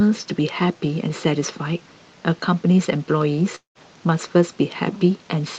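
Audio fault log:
3.55–3.78 s long network dropout: the sound trails into a fading buzz, goes silent, and resumes with 200 ms missing; likely lost packets that were concealed, then muted.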